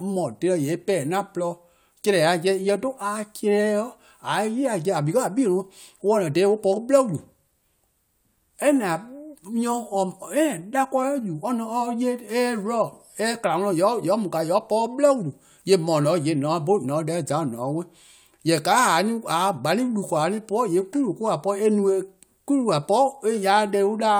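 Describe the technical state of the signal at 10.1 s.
At 10.1 s the speech signal is intact, with no audible fault at that moment.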